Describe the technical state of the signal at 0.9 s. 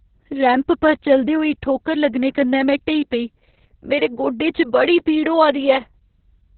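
At 0.9 s the speech carries Opus voice compression, present throughout the clip. The sound points to a very low bitrate, around 6 kbps, in SILK's narrowband mode: nothing above 4.2 kHz, and coarsely coded excitation. Unlike a simple low-pass filter, this adds a hoarse, robotic texture beyond the muffling.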